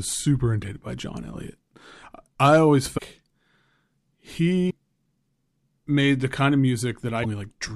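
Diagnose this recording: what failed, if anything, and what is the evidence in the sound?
At the codec stage, the speech skips ahead briefly at 0.62–0.65 s, 2.97–3.00 s (after "I always"), 4.69–4.72 s and 7.22–7.25 s, each about one 26.1 ms frame. Likely a broken MP3 bit reservoir: frames were lost, so the following frame decoded borrowed bytes from the wrong frame. Network packet loss would instead leave a gap or smoothed concealment.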